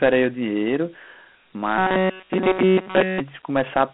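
Dialogic VOX ADPCM runs through the whole clip. The speech is confined to a telephone band of roughly 200 Hz to 3.4 kHz, with nothing above about 3.9 kHz, and a gritty hiss trails the voice. The coder stores each sample as a 4-bit difference from a prediction, so coarse steps leave plainly audible grain. The ceiling and grit fit 4-bit ADPCM at 8,000 samples a second, about 32 kbps.

Robotic sound from repeated short buffers takes over from 1.78 to 3.20 s. The speech collapses into a rigid, metallic buzz pitched at 188 Hz that only loosely tracks the original, with essentially all of the stretch replaced by repetition. The likely cause is playback starved of fresh audio, looping the last block again and again while real audio is skipped. A 188 Hz buzz fits a repeated block of about 5.3 ms.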